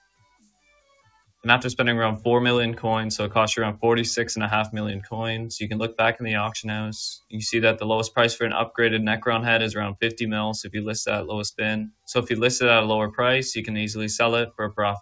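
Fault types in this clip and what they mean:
Sound cut by the noise suppressor: the suppressor mistook parts of the sound for background noise and pulled them down harder than everything around them. You can hear it right at the start, between 0.03 and 1.44 s, where roughly 0.7 s of material dips by up to about 14 dB, and again from 11.9 to 12.09 s, a short bite dropping about 20 dB, all riding on the call path's band limit at 8 kHz.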